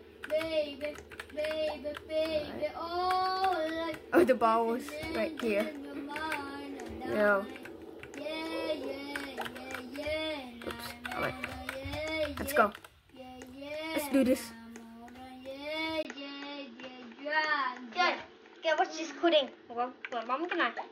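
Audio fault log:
16.03–20.91 s, input switched to a poorer device: after a 20 ms gap at 16.03 s, the sound turns duller, with nothing above 6.7 kHz, and a faint new background noise sits far beneath it while loudness stays about the same. This is likely a change to a narrower-band microphone or headset. A spectrogram shows energy sharply capped at 6.7 kHz from that point and a thin new noise floor. The waveform shows a brief flat gap but no step in amplitude.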